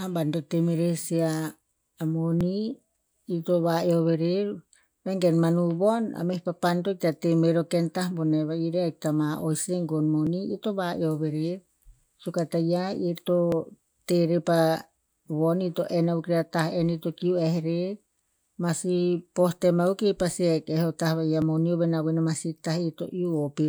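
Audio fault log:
2.41, 10.27, 13.52 and 21.42 s: four tiny jumps forward in the speech rather than a gap, most likely a dropped buffer (overrun), where the software didn't fetch its samples in time and the hardware wrote over them. The chunk vanishes and the two sides butt together, so the waveform steps abruptly. The ones at 10.27 and 13.52 s skip around 10 ms; the other two lose only a few milliseconds.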